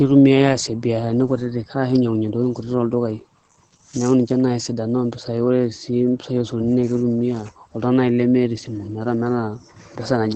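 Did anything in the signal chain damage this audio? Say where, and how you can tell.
Yes. The damage is at the codec stage. Opus voice compression runs through the whole speech clip. Nothing sits above about 8.8 kHz, so the band stops at wideband. The SILK linear-prediction coder builds the excitation coarsely. The speech sounds muffled and hoarse, which fits about 12 kbps.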